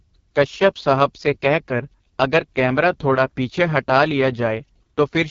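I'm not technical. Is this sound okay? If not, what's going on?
No. From start to finish, the speech has passed through the AMR wideband (HD Voice) codec, the compression used for HD phone calls, running at one of its lowest quality settings. To save data, it rebuilds the voice from a simplified model of how speech is produced, so it sounds rough and raspy, with a gritty, buzzy edge. Its crispest sounds are also cut off, leaving nothing above about 7.5 kHz.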